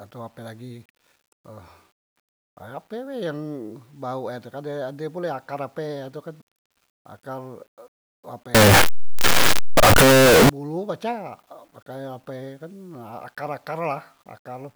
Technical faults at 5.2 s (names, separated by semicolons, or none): none